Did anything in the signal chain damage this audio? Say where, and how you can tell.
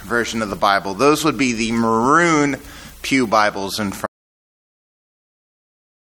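Yes. The input side of the chain failed. The likely cause is a lost source, such as a disconnected device, a dropped link or a mute engaged upstream, while the recorder kept writing silence. The result is an audio dropout to silence starting at 4.06 s and running to the end of the file. The sound cuts off mid-flow and the gap is silent with no room tone at all, so whatever happened after that point was never captured.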